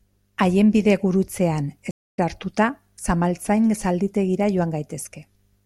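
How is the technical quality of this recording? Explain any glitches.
The recording has one clear glitch, a stream reconnect. From 1.91 s to 2.18 s the speech drops out. There are 240 ms of silence. The connection broke and the player went quiet. It then reconnected and started a fresh decoder partway through the stream. Playback did not pick up where it stopped. It resumes roughly a third of a second further on, so a short stretch of speech is skipped. The first moment after the gap comes back muted or fading in.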